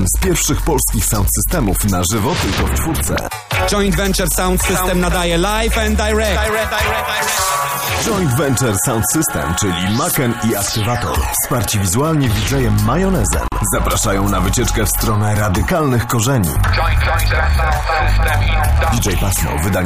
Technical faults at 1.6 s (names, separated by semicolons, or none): none